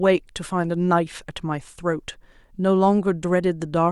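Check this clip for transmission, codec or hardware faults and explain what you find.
Nothing in this speech recording points to a fault. Careful listening turns up no event that calls for an explanation.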